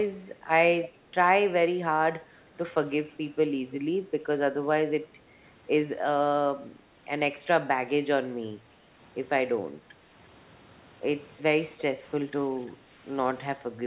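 At 12.72 s the room sound behind the speech dips by about 7 dB and recovers by 12.9 s, a brief hole of roughly a fifth of a second. This is background gated by the echo canceller: while far-end audio was playing, the canceller pulled the microphone down to keep echo out, then released it. Unlike a packet-loss dropout, nothing goes fully silent or glitches; the ambience just sags and returns, heard through the narrow, telephone-band call path that stops at 4 kHz.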